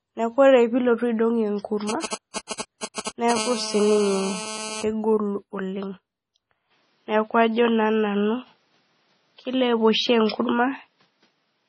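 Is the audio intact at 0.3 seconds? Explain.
No. At 0.3 s, as throughout the clip, the speech shows low-bitrate audio saved at a high bitrate: nothing is present above 10.5 kHz. This is likely a low-bitrate MP3, around 24 kbit/s, re-encoded at a much higher rate, which cannot restore the removed content.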